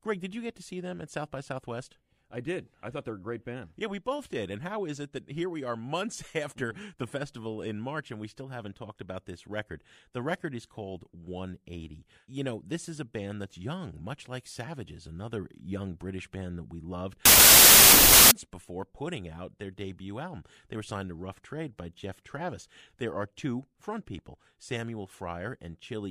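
From 17.25 to 18.31 s the speech collapses into a burst of loud, harsh noise, with the talker still faintly audible beneath it but hurried, running about 1.33 times too fast and pitched up to match. This is a wrong sample width fault: audio stored as packed 24-bit integers is read as 32-bit integers, so each value straddles mismatched bytes and only some samples keep the real signal's top bits.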